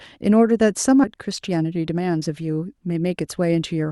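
At 1.03 to 1.05 s there's a skip ahead: the speech jumps forward with no filler, so something like 0.7 s of audio never gets played. That chunk was dropped while later audio was already queued, and the two sides butt together almost seamlessly.

Right after, from 1.16 to 3.11 s, you get jitter buffer speed-up. The receiver, holding more audio than it wanted, kept cutting out pitch-period-sized slivers, around 150 ms in total. The speech runs at about 108% speed with unchanged pitch, so it sounds a bit rushed.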